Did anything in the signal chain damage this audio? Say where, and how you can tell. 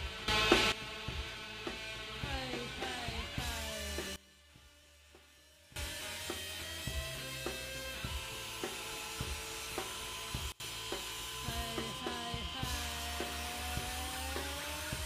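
Yes. There is a sudden gain jump in the digital processing stage. The level rises about 14 dB from 0.28 to 0.72 s, then drops about 20 dB from 4.16 to 5.76 s and about 24 dB from 10.52 to 10.6 s. In each case the sound and the background noise change together, and they snap back at the end. That points to a gain change applied from one sample to the next with no ramp, likely a setting or a bit shift. On the waveform the envelope steps sharply at each boundary. On a spectrogram every frequency band brightens or darkens at once between straight vertical edges.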